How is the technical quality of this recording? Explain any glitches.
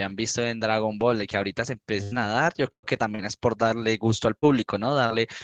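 The speech is marred by network dropouts from about 2 s on. There are two bursts of packet loss, at 2.03–2.14 s and 2.71–2.86 s, where about 80 ms and 120 ms went missing. The receiver stretched the last sound into a fading buzz or hiss, which dies to near silence in the second, then jumps ahead. Short concealed packet loss at 3.15–3.22 s, 4.39–4.45 s and 5.06–5.13 s drops about 40 ms each, patched by continuing the previous sound and blending back, so you hear brief smears or wobbles.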